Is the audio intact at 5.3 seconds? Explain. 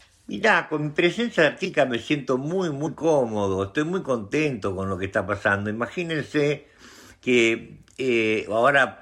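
No. At about 5.27 s the audio lurches forward slightly, as if a sliver of sound has gone missing. These are compressed frames skipped: roughly one frame, about 20 ms of audio, was never played, whether it was missing from the file or rejected by the decoder as damaged. The jump matches the 21.3 ms frame length.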